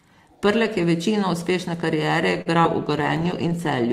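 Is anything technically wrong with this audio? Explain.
Yes, three faults sit close together in the last part of this speech clip.

From 2.41 to 2.48 s the sound hangs on one spot with a slight buzz or dip. This is a short stall from a late packet: the jitter buffer ran dry, so the receiver stretched the last sound for about 45 ms until the packet arrived. Playback then resumed with nothing skipped, but now runs about 45 ms later.

Between 2.62 and 2.65 s there is a brief smear or wobble. This is short concealed packet loss: about 20 ms of audio never reached the decoder in time, and the receiver papered over the gap by extending the preceding sound before blending back into the real signal.

From 2.86 s to the end the speech turns rougher and watery, with less top-end detail. This is a call bitrate drop: the bandwidth estimate fell and the encoder went from 32 to 16 kbps, coding more coarsely for the remaining second.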